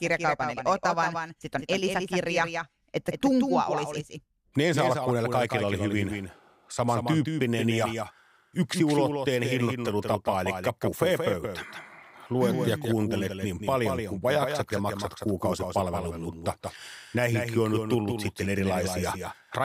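From start to finish the speech has a doubled audio track: a second full-band copy trails about a fifth of a second behind, a few dB quieter, with no decay or room colour. It likely comes from the signal being captured twice through a slower path.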